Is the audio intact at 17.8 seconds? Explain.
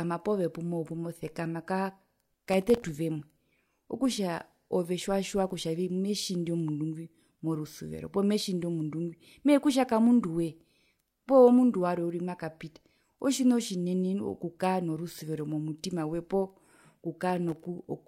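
No. Processor overload crackle runs from 17.30 to 17.85 s. The processor repeatedly misses its deadlines for very short buffers, around a millisecond and a half each. Each miss replays old audio with hard edges. Together these misses produce a gritty crackle over the speech.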